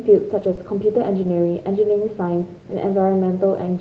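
At 0.39 s there is short concealed packet loss. About 20 ms of audio never arrived in time. The receiver carried the previous sound forward to fill the hole, then blended back into the real signal. It is heard as a brief smear up to 0.43 s.

From 0.43 to 0.53 s comes a lost packet rebuilt from error correction. Each missing frame was replaced by a low-bitrate copy carried in the next packet. So nothing drops out, but about 60 ms sounds rougher and noisier. The span fits three packets.

A second short concealed packet loss follows at 0.55 to 0.59 s. Again about 20 ms is missing and extrapolated. It gives another short wobble.

At 2.25 to 2.31 s there is a second lost packet rebuilt from error correction. About 40 ms is played from the backup copies. It has the same grainy, noisier texture. The length points to two packets.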